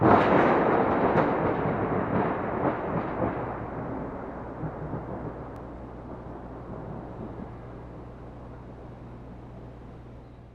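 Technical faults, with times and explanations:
5.56 s, overlap between stream segments: there's a tiny skip here where the audio jumps forward. Two of the stream's segments, which look to be about 6.0 s long, had time stamps that overlapped, so the player trimmed away roughly 2 ms it treated as doubled even though that sound only existed once. The waveform then steps abruptly from one point to a later one, and that discontinuity is what you hear as the skip.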